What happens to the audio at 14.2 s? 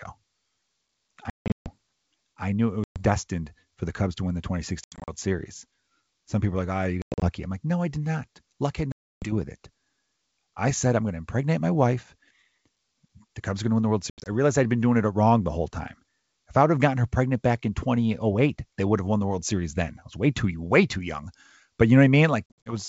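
Packet loss on the ADPCM call, 14.10 to 14.29 s, drops 120 ms of packets and desyncs the decoder's predictor, leaving hard-edged silent gaps and briefly distorted speech afterwards.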